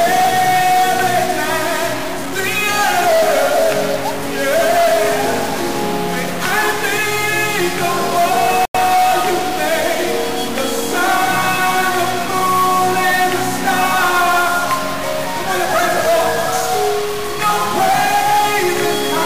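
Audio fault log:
Throughout: stuck bit. There's a constant grainy-to-buzzy roughness riding on the sound that doesn't come and go with the level, and it's likely one data bit stuck at 0 or 1. About half the sample values get knocked off by that bit's weight, following the waveform, so the error tracks the signal itself. It also flips with the sign of small values, so the quiet gaps don't go clean and fill with noise instead.
8.65 to 8.75 s: Bluetooth stall. The audio just drops out to silence for about 93 ms and then carries on. The likely cause is interference holding up packets on the wireless link. The headphones' buffer ran empty, so playback paused until the resent packets turned up. Playback then resumes either at the point where it stopped or slightly later, if queued audio was discarded on the phone side.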